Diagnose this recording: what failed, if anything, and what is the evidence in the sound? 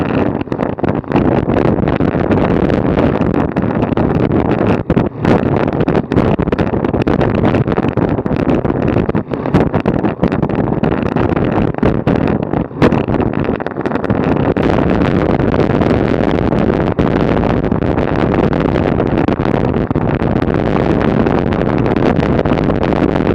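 Nothing in this recording points to a failure at any stage of the chain. There is no event in the sound that calls for a diagnosis.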